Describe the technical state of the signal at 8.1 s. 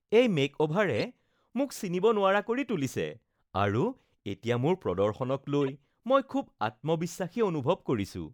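At 8.1 s the speech signal is intact, with no audible fault at that moment.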